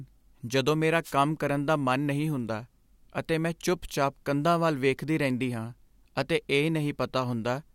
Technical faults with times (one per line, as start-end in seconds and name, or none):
1.03-1.13 wireless microphone noise hit